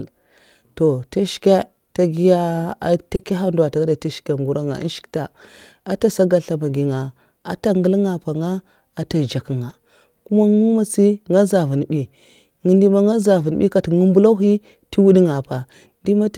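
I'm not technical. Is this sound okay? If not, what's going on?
No. Around 3.15 to 3.21 s and again at 3.23 to 3.27 s, the speech briefly smears or wobbles. This is short concealed packet loss: small pieces of the call, about 40 ms and then 20 ms, arrived too late, so the receiver guessed the missing sound by stretching what came just before.

At 3.19 to 3.21 s, 3.27 to 3.29 s, 4.75 to 4.77 s, 9.69 to 9.75 s, 11.77 s and 13.39 to 13.45 s, the sound turns briefly rougher and noisier without dropping out. Each is a lost packet rebuilt from error correction: a lower-quality backup copy, carried in the next packet, filled the gap.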